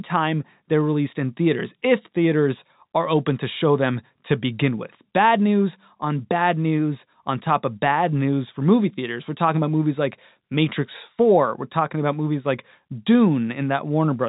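Listening through this speech clip, nothing stood out as a technical fault at any point.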